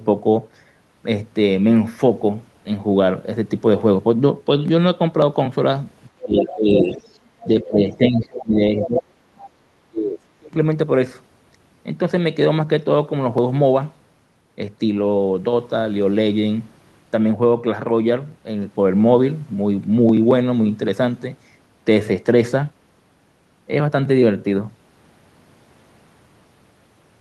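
From 6.2 to 6.9 s the speech dips by about 20 dB, in pieces adding up to roughly half a second. Almost at once, from 6.23 to 7.47 s, a second voice comes through at about 5 dB below the talker, nearly as loud.

The speech sags again from 7.47 to 9.04 s, about 20 dB down for roughly a second in total. A faint trace of the other voice, about 25 dB below, surfaces at 7.92 to 8.23 s and again at 9.37 to 9.5 s. From 9.62 to 10.56 s the speech drops hardest, by about 40 dB, and is largely gone for around 0.7 s.

The dips are speech suppressed in double talk. With both sides talking at once, the echo canceller likely could not tell the local talker from its own loudspeaker echo, so it pulled everything down, the talker included.

The second voice is the other side's voice leaking through. The far-end sound played on the loudspeaker reached the microphone, and the canceller likely left some of it behind. 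It was strong at first and only faint scraps later.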